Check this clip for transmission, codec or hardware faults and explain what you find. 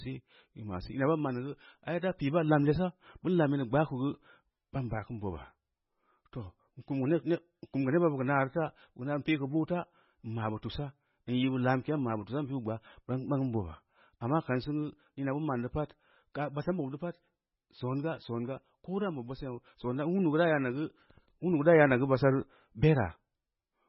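One fault runs through the whole clip: heavy MP3 compression. Nothing survives above 5.5 kHz, which fits a very low bitrate around 16 kbps. Starved of bits, the encoder likely cut the treble and dropped weak frequency lines that flicker frame to frame. The speech sounds watery and swirly, s sounds turn metallic, and attacks smear. A spectrogram would show a hard ceiling at 5.5 kHz with blinking holes below it.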